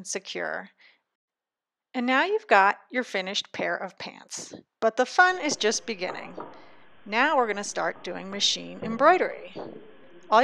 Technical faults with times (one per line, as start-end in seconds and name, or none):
none